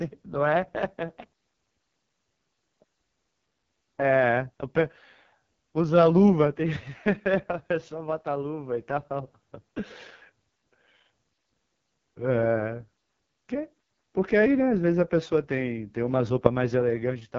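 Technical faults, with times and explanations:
Throughout, AMR wideband (HD Voice) codec: rough, raspy speech with nothing above 7.4 kHz, which fits the lowest 6.6 kbit/s rate, too sparse to model the voice.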